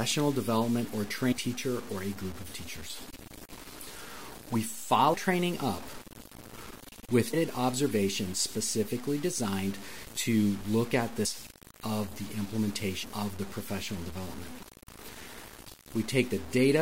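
Throughout the speech, quiet passages sound grainy and gritty, with noise that tracks the signal. This is likely low bit depth without dither, about 6 bits, truncated.

At 1.31 to 1.33 s, 5.13, 7.33, 11.25 and 13.02 s, brief chirps and blips are heard. Damaged data in a compressed stream made the decoder lose sync.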